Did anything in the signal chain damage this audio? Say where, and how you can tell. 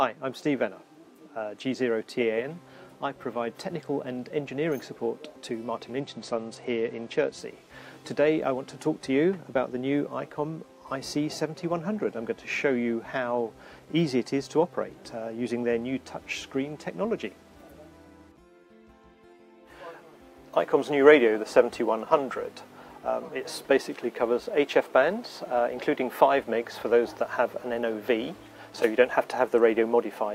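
Yes. A Bluetooth SBC bit pool drop at the codec stage, 6.0 to 7.41 s: treble dulls and gritty noise rises, then clears. Starved upper sub-bands vanish and the rest quantise coarsely, which fits a bit pool falling from 28 to 11. Unlike a dropout, nothing goes silent.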